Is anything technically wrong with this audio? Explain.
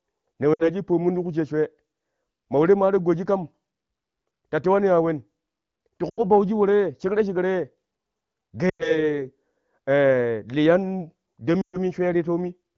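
Yes. Four bursts of lost AMR speech frames: at 0.54–0.69 s (before "shi pomn ti"), 6.09–6.22 s (before "bauji woro"), 8.69–9.09 s and 11.61–11.77 s. Radio errors corrupted frames on this wideband HD Voice link, so the decoder repeated the last good pitch and vocal tract settings at falling gain. The gaps of about 60, 80, 100 and 120 ms fit runs of three to six 20 ms frames. Each drops to near silence within two frames, with the speech returning thin and rough.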